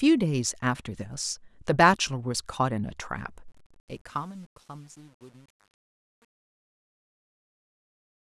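A speech recording with truncation distortion on a fade from 3.48 s to the end: the fade-out lasts from about 3.5 s, but the level steps down grittily, growing worst from 3.82 s. Unlike hiss, the grit follows the signal. That fits undithered output near 9 bits.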